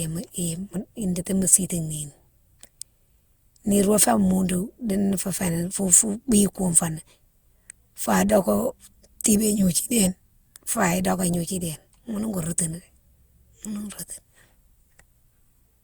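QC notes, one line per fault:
Throughout, generation loss: the speech sounds swirly, smeared and hollow, more so than its bitrate alone suggests. Consonant onsets blur and lose their edge. Content still reaches 20 kHz, so this is not simple band-limiting. The likely cause is repeated lossy re-encoding, about five passes, with a character that points to Opus at around 64 kbit/s. Each pass quantises on a shifted frame grid, so noise stacks up.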